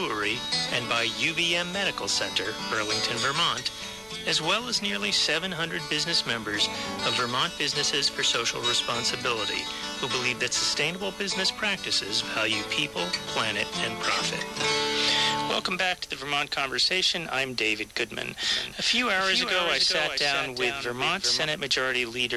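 From 18.43 to 21.45 s an abrupt, dry copy trails roughly 400 ms behind, about 5 dB down: a doubled audio track, likely from a slower second capture path.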